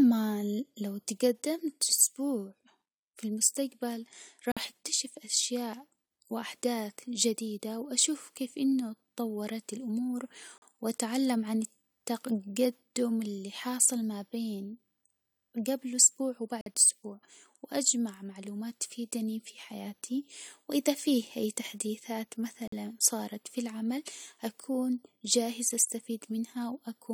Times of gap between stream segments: 4.52-4.57, 10.58-10.62, 16.61-16.66, 22.68-22.73

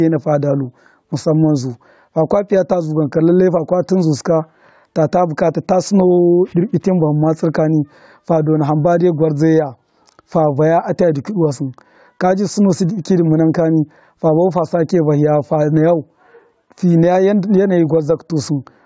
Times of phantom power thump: none

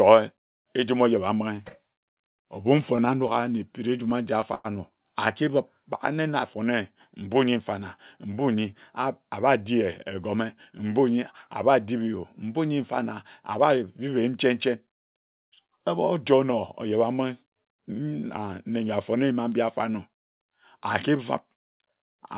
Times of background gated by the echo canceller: none

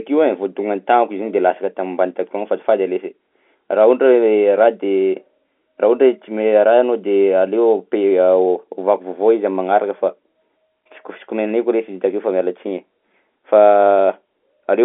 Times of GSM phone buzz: none

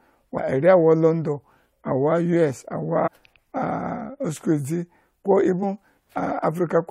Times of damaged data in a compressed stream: 0.37-0.39, 3.06-3.08, 5.62-5.64

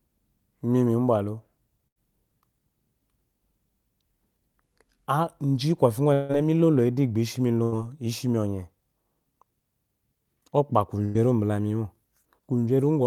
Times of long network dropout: 6.13-6.32

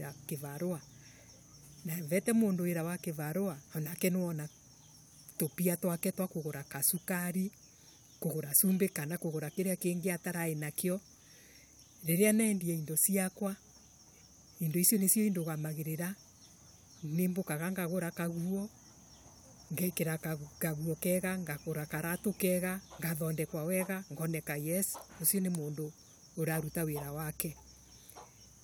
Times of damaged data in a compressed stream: none

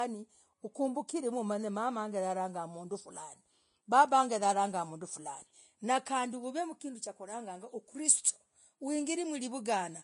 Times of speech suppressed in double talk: none

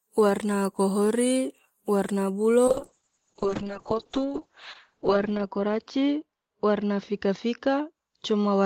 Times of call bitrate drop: 2.69-8.66

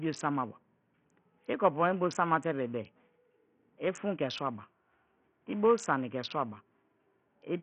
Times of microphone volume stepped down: none

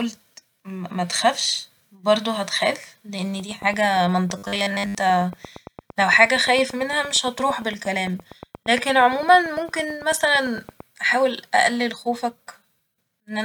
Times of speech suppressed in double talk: none

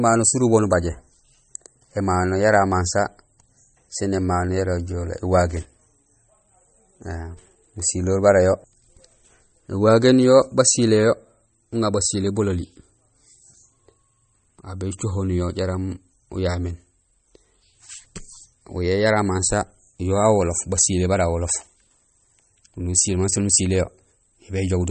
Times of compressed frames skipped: none

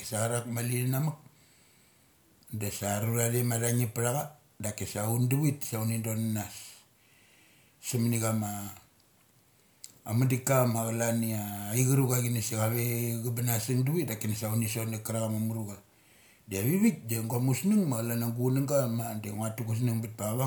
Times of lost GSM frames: none

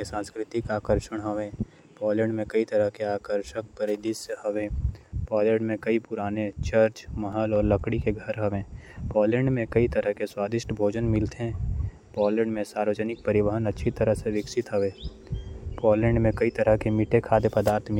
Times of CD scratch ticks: 6.86-8.48

